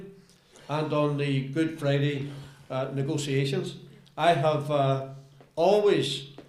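No technical faults are audible.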